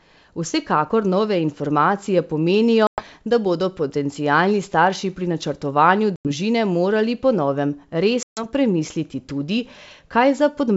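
A speech clip over what sounds like a wideband G.722 link, hit by packet loss on an ADPCM call three times: 2.87 s (after "nove informacije pomenijo"), 6.16 s (after "starši pri načrtovanju") and 8.23 s. Each is a hard silent gap of about 90–140 ms, roughly 10 to 15 packets. The decoder's predictor then drifts, so the sound resumes slightly distorted briefly.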